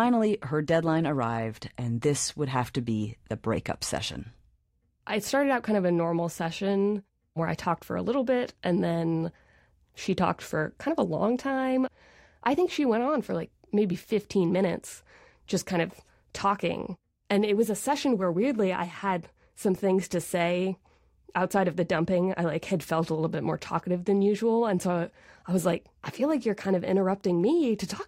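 From 26.47 to 28.08 s, faint Wi-Fi interference: a nearby radio's 102.4 ms beacon, rectified in the circuit, ticks ten times per second, far slower than a GSM buzz.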